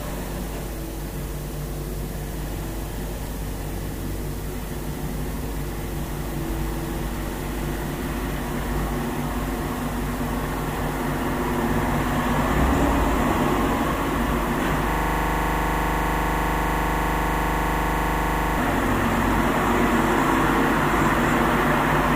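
A recording of everyday sounds with a system hang loop from 14.91 s to 18.58 s. For about 3.7 s, a single 40 ms slice of audio repeats exactly, 92 times over, producing a rigid buzzing stutter at 25 Hz. The host or audio driver stalled while the playback hardware kept reading the same ring buffer, replaying its stale contents until the system recovered.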